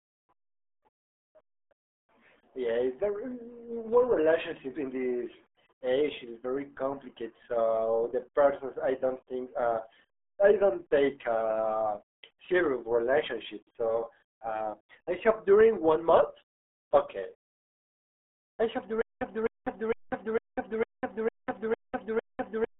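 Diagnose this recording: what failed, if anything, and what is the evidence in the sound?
The whole recording has passed through the RealAudio 14.4 codec, the RealAudio 1 speech coder running at 8 kbit/s. The speech sits in a narrow telephone-like band from roughly 250 Hz to 3.5 kHz, with nothing at all above 3.8 kHz, so it sounds muffled and dull. The coding damage is heavy: at that bitrate the coder models the voice coarsely, which gives the speech its gargly, watery texture from start to finish.

From 19.01 s to the end, the audio turns into a stutter with silent gaps. A 256 ms fragment plays, then 198 ms of digital silence follows, and the same fragment returns every 454 ms, eight times in all, until the recording stops. The likely cause is a stall at the network or playback buffer. Each retry replayed the last buffered fragment and then ran dry, so whatever audio should have followed 19.01 s is lost.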